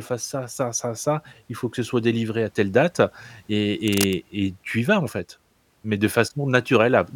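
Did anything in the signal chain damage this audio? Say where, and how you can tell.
Yes. From 3.87 to 4.21 s, just before "et tu y vas", cable scratch noise of dense, uneven crackle sits around 10 dB below the speech, likely from a worn cable or connector moved in the analogue wiring. On a spectrogram it shows as broadband vertical speckles; the waveform shows irregular spikes.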